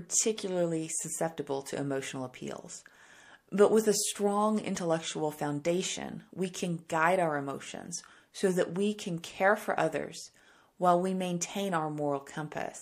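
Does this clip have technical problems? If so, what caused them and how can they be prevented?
Yes. Pre-echo occurs at 6.88 s, after "intellectual foundation we can", and at 9.22 s, after "so that we can". In each, a short hiss about 11 to 12 dB above the background leads a sharp attack by about 18 ms. The codec spread its quantisation noise over a whole transform block, which fits a 36 ms window with no switch to short blocks. On a spectrogram, a thin broadband smear sits just ahead of each onset. On the waveform, low-level fuzz precedes the attack. Enabling short-block switching on transients, or encoding at a higher bitrate, would prevent it.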